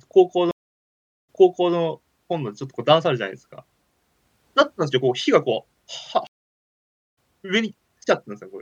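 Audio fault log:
0.51–1.75 s, stream reconnect: the connection drops, leaving about 0.77 s of silence, then the sound comes back 0.47 s earlier than where it cut, so a short stretch plays twice. The server resent a burst after the player reconnected, and the fresh decoder eases in.
6.27–7.17 s, stream reconnect: again it goes silent, this time for about 0.9 s, but it picks up roughly a second later, so that chunk is simply lost.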